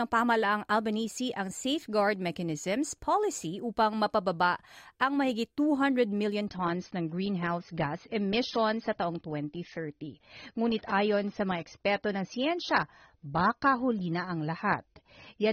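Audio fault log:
6.47–15.52 s, adaptive stream at a lower bitrate: the player switched to a leaner encoding, consistent with a drop from 96 to 24 kbit/s AAC. From then on nothing is heard above 6.3 kHz, so the speech abruptly turns duller, with no gap.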